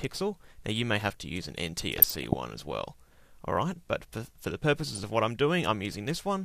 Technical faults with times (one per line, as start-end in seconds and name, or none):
1.98-2.34 DAB burbling
4.85-5.05 DAB burbling